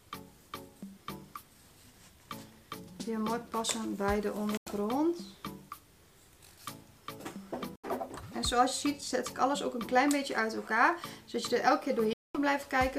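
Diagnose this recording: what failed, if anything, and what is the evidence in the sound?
The playback link failed, likely a Bluetooth dropout to the headphones. Abrupt silent gaps occur at 4.57–4.69, 7.76–7.90 and 12.13–12.38 s. The sound resumes further along, as if it had played on, unlike a buffer underrun, which stalls and continues where it stopped.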